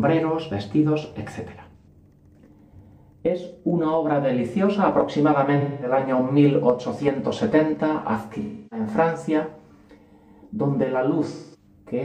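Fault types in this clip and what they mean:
AAC frame loss with concealment: coded audio frames went missing, and the decoder filled each gap by rebuilding from the last good spectrum. This leaves four smeared, noisy patches at 1.77 s, 5.60 s, 8.41 s and 11.32 s, lasting about 0.09 to 0.3 s.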